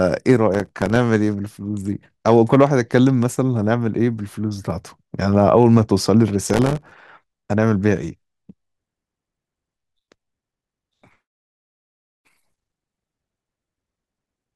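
Processor overload crackle tears through the speech at 0.54–0.96 s, 6.43–6.92 s and 11.81–12.58 s. Dozens of very short buffers, around 1.5 ms each, miss their deadlines and drop to silence. That leaves gritty bursts of tiny gaps, unlike a single clean dropout.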